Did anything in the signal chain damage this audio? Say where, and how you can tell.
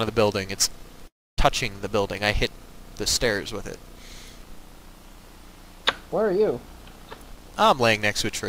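Yes. At the network and jitter-buffer stage there is a call audio freeze from 1.07 to 1.40 s, most likely because packets were held up and the buffer ran empty. The last sound is briefly stretched before it decays, and about 0.28 s of the gap is silent. When audio resumes it picks up where it stopped, so nothing is lost, but everything after it arrives about 0.3 s late. A waveform shows a flat line there. A spectrogram shows a short smear of the last spectrum followed by a blank column.

The same buffer then causes a jitter buffer speed-up from 7.16 to 7.82 s. Having built up extra delay, the receiver cuts out short pitch-period pieces one after another, around 150 ms in total, so this stretch runs at 118% speed. Pitch is unchanged, so it sounds hurried rather than higher. On a spectrogram the harmonics keep their frequencies while events are packed closer in time. The waveform shows repeated tiny splice points where cycles were removed.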